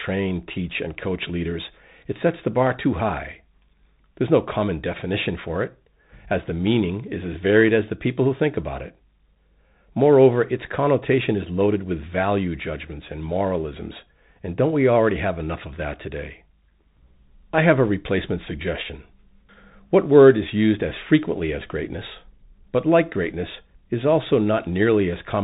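Throughout the speech, the Bluetooth CVSD headset codec shapes the sound: a one-bit delta coder with adaptive step size, consistent with a 64 kbps link. Nothing above 3.8 kHz survives, s sounds turn scratchy, loud bright peaks outrun the step and distort, and granular hiss sits underneath.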